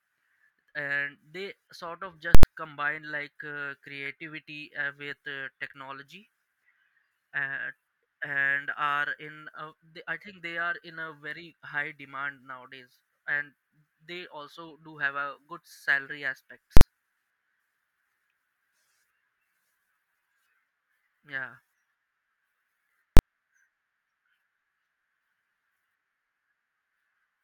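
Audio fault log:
2.35–2.43 s, 16.77–16.81 s, 23.17–23.19 s: invalid numbers at full scale. Computed values go infinite or invalid and pin the output at maximum for blocks of about 85, 43 and 21 ms, which fits 4096-, 2048- and 1024-sample blocks. Each is heard as a very loud pop. The first falls between "sort of" and "combine like uh creativity".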